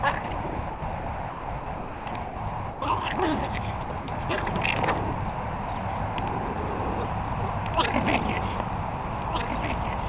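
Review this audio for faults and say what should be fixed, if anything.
Sound chopped by the voice detector appears from 0.5 to 2.36 s and again from 3.84 to 4.08 s. In the first stretch, quiet parts totalling about 0.92 s are swapped for comfort noise. In the second, about 140 ms is swapped. The likely cause is a sender's voice detector that repeatedly cut transmission and resumed it. Unlike a single dropout, the switching happens more than once within each stretch. Prevention: lower the detector's threshold and lengthen its hangover time.

Sound dropped by the voice detector occurs at 2.7 to 2.82 s, where 120 ms of sound gives way to steady comfort noise, and at 6.54 to 6.56 s, where 20 ms is replaced. Here the detector, likely misjudging quiet sound as background, stopped sending once and then triggered again. That single clean gap filled with smooth noise separates it from the repeated flicker of chopping. 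Prevention: apply the same threshold and hangover fix, or disable discontinuous transmission.

A doubled audio track starts abruptly at 6.89 s and runs to the end. A second full-band copy sits about 5 dB below the original and trails it by roughly one and a half seconds. It carries no decay and no room colour, so it is not reverb or acoustic echo, which would sound diffuse and fade. Like the original, it stops at about 4 kHz, as expected on this G.711 call path. The likely cause is a second, slower capture path or a misaligned edit mixing in a duplicate. Prevention: remove the extra capture route or delete the duplicate layer.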